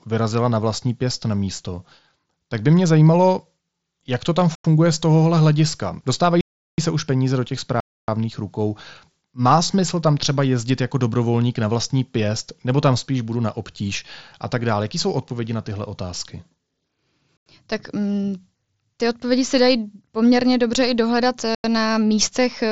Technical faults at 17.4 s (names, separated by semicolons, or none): block of digital silence